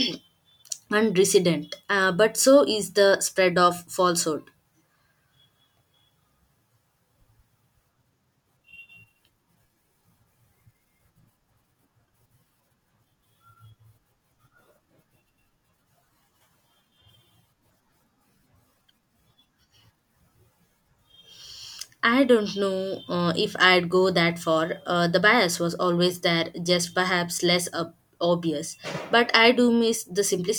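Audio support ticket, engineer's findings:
No audible fault on the speech path: levels, continuity and timing hold steady throughout, with no dropouts, distortion or glitches to trace to any component.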